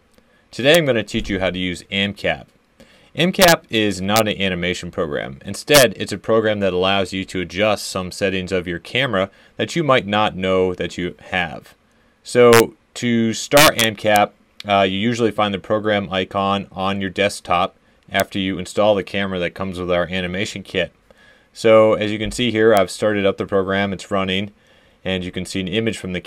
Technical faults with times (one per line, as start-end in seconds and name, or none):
0.75 integer overflow
3.42-3.52 integer overflow
4.16-4.20 integer overflow
5.74-5.83 integer overflow
12.53-12.60 integer overflow
13.57-14.16 integer overflow
18.20 integer overflow
22.77 integer overflow